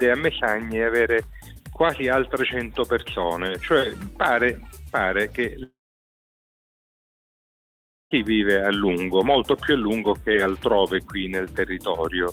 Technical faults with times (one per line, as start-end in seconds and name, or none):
5.63-8.13 long network dropout